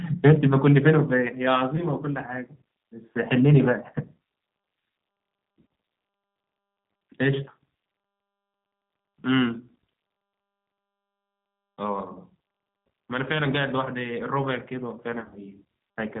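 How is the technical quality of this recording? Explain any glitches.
Technical quality is limited: the audio is band-limited and coded at a low rate throughout, with three short dropouts that the decoder patches over.

Throughout, the speech sounds slightly rough, thin and synthetic, with nothing above 4 kHz. That is the G.729 codec at 8 kbit/s, which rebuilds each 10 ms frame from a vocal tract filter, a pitch predictor and a handful of pulses rather than the actual waveform.

At 1.76–1.84 s, 12.13–12.18 s and 15.20–15.39 s, the speech briefly turns buzzy or smeared, then fades and recovers weakly. This is VoIP packet loss concealed by the speech codec. The first two each fit a single lost 20 ms packet. The last is about 100 ms lost over 160 ms, in runs up to 40 ms long. The decoder extends its last pitch and filter at falling gain, so the voice stays degraded for a moment after audio returns.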